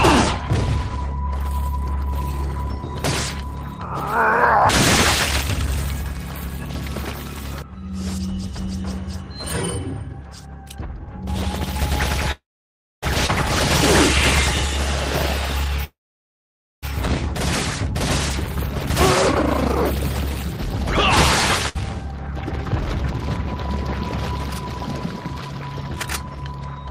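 At 12.31 to 13.05 s and again at 15.84 to 16.85 s the sound stalls in a call audio freeze. A brief fading buzz gives way to silence for about 0.61 s and 0.89 s, likely because delayed packets emptied the jitter buffer. On a spectrogram this shows as a smeared tail followed by a blank column. Nothing is lost, since playback then resumes exactly where it stopped.

Right after the first freeze, at 13.27 to 13.31 s, there is a skip ahead, and a second one follows at 21.69 to 21.77 s. Roughly half a second and just under half a second of audio are dropped, and the surrounding audio is spliced almost directly together. The waveform shows an abrupt discontinuity with no gap.

At 15.60 to 15.72 s a jitter buffer speed-up removes roughly 100 ms in pitch-period slices, so the sound plays at 166% speed with unchanged pitch. A spectrogram shows harmonics at the same height but compressed in time.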